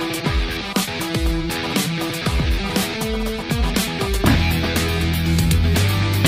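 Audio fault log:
No faults heard anywhere in this recording.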